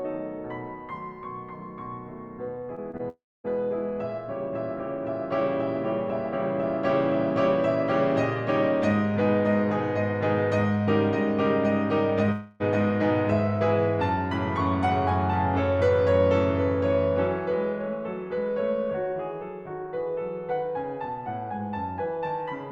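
At 2.75 to 2.79 s, 2.91 to 2.95 s and 2.97 to 3.01 s the music has three quick smears, each a short concealed packet loss. About 20 ms of audio failed to arrive each time, and the decoder bridged the gap by extending the preceding sound before blending back. On a spectrogram each one shows as a thin vertical band where the harmonic detail goes smooth or slightly blurred. The waveform stays continuous but briefly loses its fine texture.

Just after these, from 3.09 to 3.46 s, the music breaks off in a long network dropout, likely caused by a run of lost packets. The last sound is stretched into a fading buzzy tail, and for about a quarter of a second near silence is left before the music resumes further along, with the missing passage skipped. The spectrogram shows smeared harmonics thinning into an empty gap. At 12.32 to 12.62 s a second dropout of about 0.28 s is covered entirely by synthetic continuation, with no silent stretch, and it appears as a flat, blurred patch.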